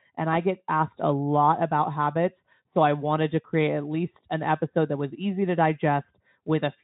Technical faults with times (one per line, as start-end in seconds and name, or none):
none